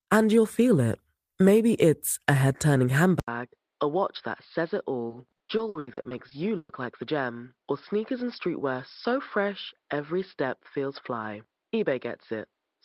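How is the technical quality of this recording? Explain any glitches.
The recording has two problems: one affects most of the clip from about 3.2 seconds on, and the other a shorter stretch within it.

Just after "a head turning", at 3.20 s, the input was likely switched to a poorer device. After an 80 ms silence the sound returns duller and boxier, with nothing above 5.3 kHz, about 5 dB quieter, and carrying a faint new noise floor until the end.

From 5.09 to 6.85 s there is repeated packet loss, which gives a robotic sound. About a dozen gaps, the longest 120 ms, are patched by stretching the preceding sound across them. That covers nearly a third of the stretch and leaves it choppy.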